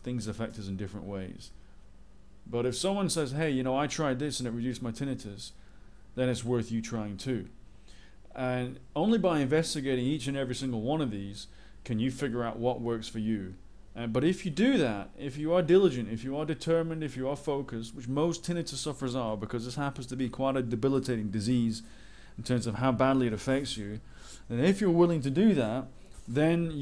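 No technical faults are audible.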